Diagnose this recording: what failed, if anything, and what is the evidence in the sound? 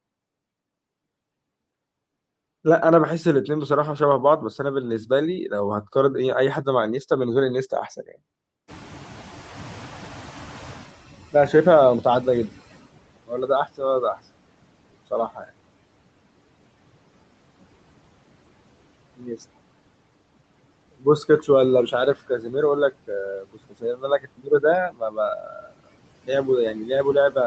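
Noise suppressor artifacts, throughout, in call processing: frame-by-frame gain cuts steady noise by about 21 dB, so the noise sinks between words and rises under them.

Noise suppressor catching up, 8.67–12.86 s: room noise jumps about 23 dB near 8.5 s, and the lagging estimate passes it before cutting about 20 dB over 4.2 s.

Speech cut by the noise suppressor, 13.27–14.19, 15.11–15.5, 19.17–19.43 s, and from 20.92 s to the end: speech mistaken for noise drops up to about 22 dB and sounds swallowed.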